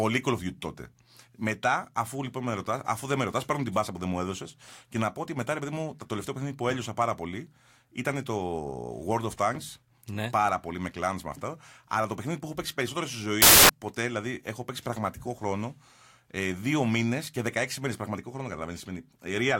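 From 13.42 to 13.69 s, the speech is swamped by a burst of loud, harsh broadband noise lasting about 0.27 s. This is a case of samples built from the wrong bytes. The reader assembled each sample incorrectly, through a byte offset, swapped byte order or wrong alignment. The rapidly changing low bits ended up as the most significant part of every value. The result is broadband noise.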